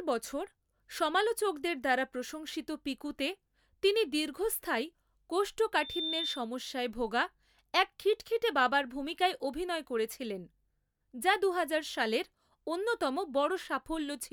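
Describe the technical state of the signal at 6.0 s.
At 6.0 s the microphone is picking up the loudspeaker it feeds, and the loop's gain has passed unity at about 3.6 kHz, causing loudspeaker feedback squeal from 5.76 to 6.49 s. That single frequency reinforces itself on each pass, so a pure high tone swells over roughly a third of a second to about the level of the speech, then stops just before "ভোগা এক খিটখিটে বাবার".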